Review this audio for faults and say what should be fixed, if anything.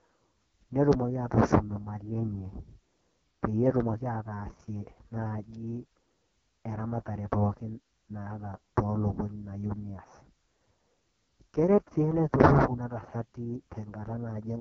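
The whole clip has been through the AMR wideband (HD Voice) codec, and it's been squeezed hard. The speech comes out rough and raspy all the way through, which fits the codec's lowest mode, around 6.6 kbit/s, where the pulse-driven vocal tract model runs short of bits to describe the voice. Nothing sits above about 7.6 kHz, and the top band is just shaped noise rather than real detail. To prevent it, carry the call at 12.65 kbit/s or higher, or pick up the audio before it reaches the codec.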